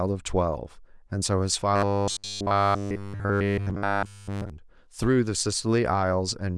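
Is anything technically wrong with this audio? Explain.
Yes. From 1.76 to 4.50 s the speech becomes a robotic sound from repeated short buffers: a rigid, metallic 100 Hz buzz, likely from one 10 ms buffer looping constantly while new audio is skipped.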